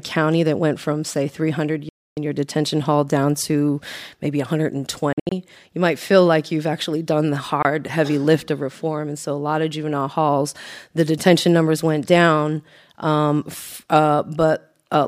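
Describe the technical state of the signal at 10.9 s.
At 10.9 s the speech signal is intact, with no dropout, distortion, glitch or other technical fault to be heard.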